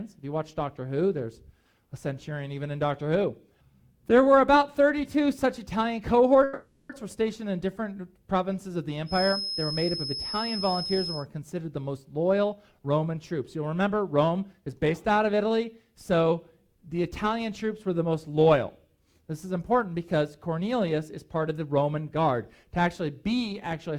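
At 6.43 s packets were likely held up on the way, so the jitter buffer ran empty and the receiver stretched the last sound into a fading buzz or hiss until 6.92 s. This call audio freeze inserts roughly half a second of filler, then the audio resumes with nothing lost.

From 9.05 s to 11.27 s the loudspeaker-to-microphone path likely sits right at the edge of feedback. One frequency near 5.2 kHz rings on without building up, a thin feedback whistle about 10 dB below the sound, swelling and fading slowly in level.

Three times the jitter buffer held more audio than it needed, and the receiver repeatedly removed short pitch-period slices to shrink the delay. This jitter buffer speed-up runs at 111% from 12.06 s to 12.88 s, 110% from 13.79 s to 15.55 s, and 107% from 20.59 s to 23.02 s. Each stretch sounds hurried at unchanged pitch, trimming roughly a tenth to a fifth of a second.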